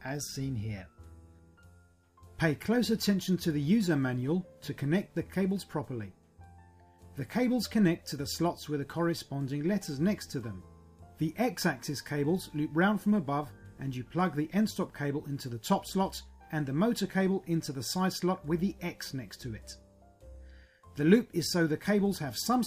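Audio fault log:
No faults were found in this clip. Nothing in the audio calls for a log entry.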